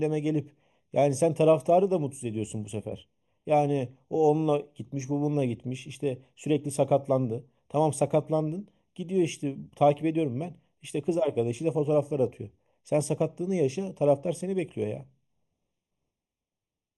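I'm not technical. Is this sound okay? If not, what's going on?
No. The speech sounds hollow throughout, as if heard through a tube. This is channel delay (comb filtering): one channel runs about a third of a millisecond late, and mixing them cancels certain pitches, starting around 1.5 kHz.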